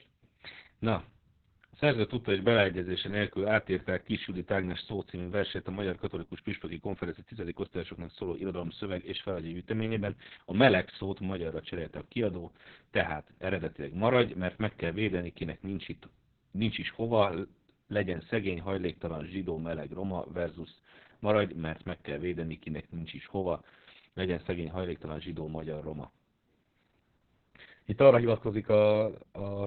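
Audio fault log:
throughout Opus voice compression: speech sounds muffled, hoarse and robotic, with nothing above 4.3 kHz, which fits narrowband SILK coding at a very low bitrate near 6 kbps.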